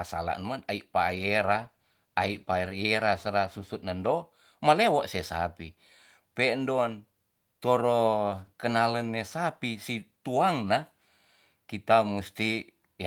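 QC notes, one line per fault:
1.09–4.19 s, call bitrate drop: just after "salah man ai" the encoder's budget falls from 32 to 18 kbps and stays at the bottom for about 2.5 s. With fewer bits, the codec quantises the spectrum more coarsely, so the speech turns rough and watery, and the top end thins. Quality returns by "me'lewo se sapi pen'don". Unlike packet loss, nothing drops out or stutters; the sound stays continuous and is simply degraded.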